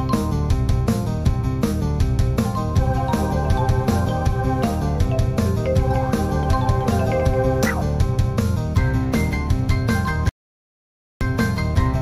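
The audio cuts out at 10.29 s and stays fully silent until 11.21 s, about 0.92 s of dead silence with no room tone underneath. That's an audio dropout to silence, likely a momentary loss of the input while the recorder kept writing, so whatever was there is gone.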